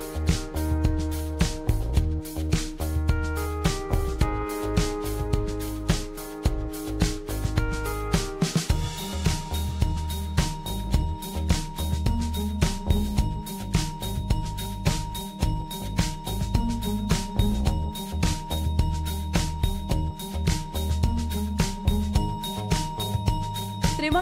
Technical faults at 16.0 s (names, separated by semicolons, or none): none